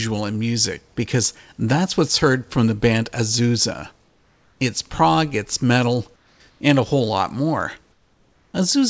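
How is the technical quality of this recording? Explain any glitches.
The recording has one recurring glitch, and it falls in the pauses. The sound comes through a call path with nothing above 8 kHz.

Comfort noise in place of the background appears at 4.04–4.60 s, 6.16–6.40 s and 6.50–6.60 s (after "prog it's metal", before "and a whole lot"), and at 7.92–8.54 s (after "a whole lot more"). The sender likely stopped transmitting during silence, so the receiver filled each gap with synthetic noise. The textured room hiss turns flat and featureless, about 4 dB quieter, except at 6.50 s, where the level holds.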